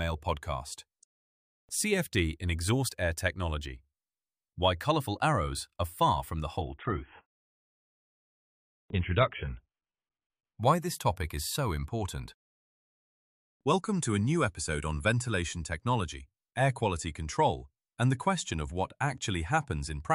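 From 6.61 s to 10.61 s the audio drops to an adaptive stream at a lower bitrate. The treble cuts off abruptly, with nothing above 3.9 kHz, and codec artefacts rise, which fits a switch from roughly 96 kbit/s to 16 kbit/s AAC. Full quality returns suddenly, with no gap.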